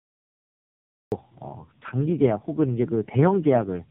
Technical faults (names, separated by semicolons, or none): tandem speech coding; cut-off start